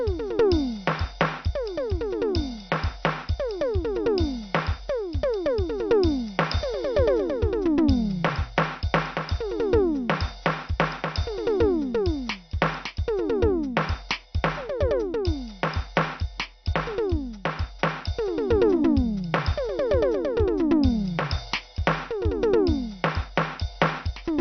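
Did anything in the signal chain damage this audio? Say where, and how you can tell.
Yes. Throughout, the music sounds dull and gurgling, with nothing above 6.2 kHz. This is likely MP2 compression at the codec stage: too few bits switch off the upper sub-bands and coarsely quantise the rest.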